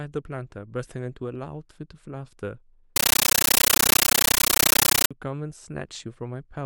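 Speech clip; from 2.96 to 5.11 s a compressed stream is played as audio: undecoded AC-3 data, consistent with 640 kbps, bursts as loud static, 13.3 ms noise bursts 31.25 times a second.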